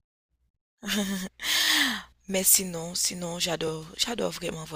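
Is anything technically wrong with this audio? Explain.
Yes. The speech contains overlapping chunks at 1.65 to 1.67 s and 3.67 to 3.70 s: 2 s processing chunks each restart 21 ms early, so that sliver replays, heard as a brief click or stutter.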